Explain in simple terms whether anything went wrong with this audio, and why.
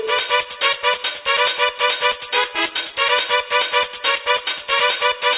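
Nothing stood out on listening, so there's nothing here that sounds like it went wrong.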